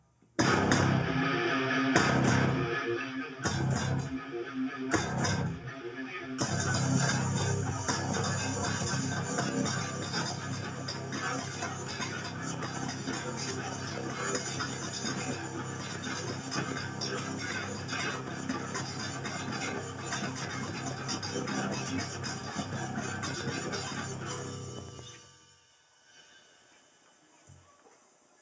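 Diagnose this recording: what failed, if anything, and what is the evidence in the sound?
The failure sits in call processing: a noise suppressor tuned for speech stayed active and was applied to music or sounds. Throughout the clip it treats sustained tones, ambience and reverb tails as noise and pulls them down by something like 10 dB, while onsets pass mostly intact. Held material sags after each attack and decays are cut short, so the sound pumps and thins. The band stopping at 8 kHz is ordinary call-path filtering, not part of the fault.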